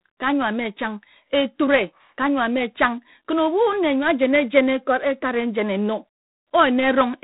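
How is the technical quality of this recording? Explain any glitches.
The quality is held back by one fault that runs the whole way through: G.726 ADPCM coding. Instead of sending each sample in full, the coder guesses the next one and sends only a few bits describing the error. The damage here is plainly audible and fits the 24 kbit/s mode, about 3 bits a sample. That coarse step leaves a harsh, rasping hiss riding on the speech, rising and falling with its level. Nothing above 4 kHz comes through, so it all sounds dull and telephone-narrow.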